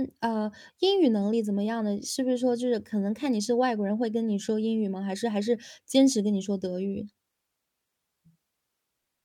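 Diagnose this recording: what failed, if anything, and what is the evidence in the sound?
A brief squeak-like burst cuts across the speech from 5.90 to 5.93 s. It is a short blip of misplaced energy peaking at about -25 dBFS. This points to the codec stage: a corrupt frame was decoded. Bits inside a single compressed frame were damaged, and the decoder played it anyway. The misread gains and spectral codes put energy at the wrong frequencies for the roughly 30 ms span of that one frame.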